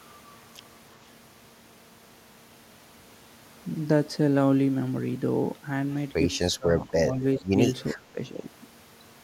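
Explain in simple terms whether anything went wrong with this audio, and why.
Speech suppressed in double talk, likely because the echo canceller mistook overlapping talk for echo and turned it down. The speech dips and breaks up at 6.57–6.68, 6.86–6.93, 7.1–7.47 and 7.93–8.18 s.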